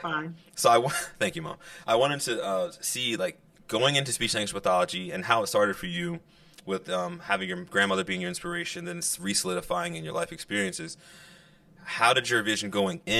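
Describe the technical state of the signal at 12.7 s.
At 12.7 s the speech carries channel delay (comb filtering), present throughout the clip. One channel is late by around 5 ms, and when the two are summed to mono, content common to both cancels at regularly spaced frequencies: the first notch sits near 100 Hz, with further notches repeating about every 200 Hz above it. The result is a hollow, phasey tone, with fixed gaps in the spectrum that do not move with the speech.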